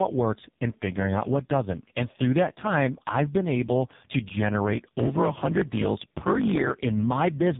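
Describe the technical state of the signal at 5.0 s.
One processing stage is writing longer blocks than the next stage reads, and each block's tail is discarded. This block size mismatch (truncated) runs from 4.72 to 6.76 s, just after "I've been able to". At 5.0 s it produces a steady 50 Hz buzz, and the speech runs about 1.07 times fast at roughly normal pitch, which fits 1024-sample blocks being cut short.

Underneath this, the signal has been through tandem speech coding across two successive speech codecs, ending in a low-rate AMR-NB stage. Each codec recodes the previous one's damage, so the sound is rough, muffled and warbly, with nothing above 3.8 kHz.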